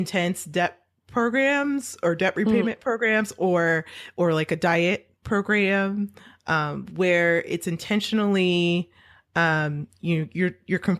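Nothing is technically wrong with this speech clip.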